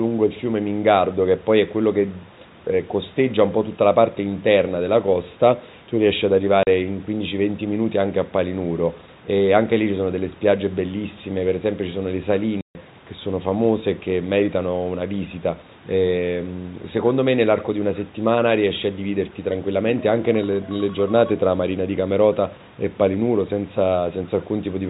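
At 6.63 s the speech cuts out for 40 ms. At 12.61 s it cuts out for 140 ms. This is packet loss filled with silence. Missing packets were replaced by nothing, and the gap lengths fit 10 ms packets. Each hole has hard edges.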